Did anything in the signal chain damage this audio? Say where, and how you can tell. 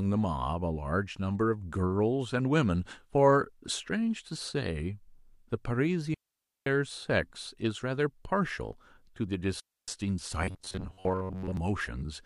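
Yes. Digital wireless dropouts on the radio link muted the receiver at 6.14 to 6.66 s and 9.60 to 9.88 s, leaving clean near-silent holes with no noise bursts.

Robotic sound from repeated short buffers is likely from a starved driver buffer repeating its last block. From 10.42 to 11.57 s, a rigid 93.8 Hz buzz replaces most of the speech, which fits a 10.7 ms buffer.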